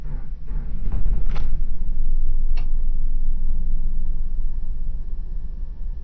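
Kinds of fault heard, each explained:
Wrong sample rate: the samples are clocked out far more slowly than they were captured, with no resampling in between, which fits 44.1 kHz material being played at 16 kHz. Every event in the sound stretches out to about 0.36 times its original speed, and the whole spectrum drops with it by roughly 17.6 semitones, close to an octave and a half. The result is slow, sluggish, muffled sound throughout the clip.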